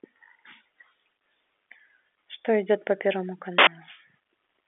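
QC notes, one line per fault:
3.58 to 3.67 s, uninitialised buffer: a sudden, loud burst of harsh digital noise lasting about 85 ms. A block was played before any audio had been written to it, so stale memory came out as samples. The length fits a 4096-sample buffer.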